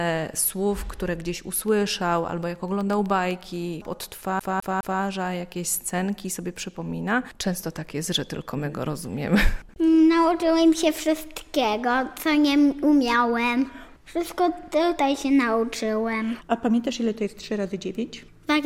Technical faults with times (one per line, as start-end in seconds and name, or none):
1.56-3.81 periodic USB or driver dropouts
4.39-5.01 CD stuck on one turn